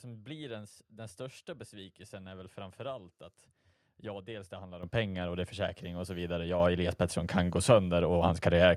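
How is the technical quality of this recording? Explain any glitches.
The speech has two sudden jumps in loudness. At 4.83 s and 6.6 s, the voice and background noise step up together, by about 11 dB and then about 7 dB. This is the microphone volume stepped up: the call software judged the input too quiet and raised the device gain abruptly.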